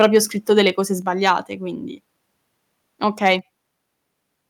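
Short speech recording with two recurring problems. There's crackly microphone overload at 0.01–0.18 s (right before "scritto delle cose"), 1.26–1.3 s and 3.25–3.33 s, with peaks pushing about 2 to 3 dB past the converter's limit and their tops sheared off, likely from input gain set too high. There's also the microphone volume stepping down at 1.02 s and 3.39 s, an abrupt level drop of about 4 dB and then about 3 dB, likely the call software trimming the mic after it clipped.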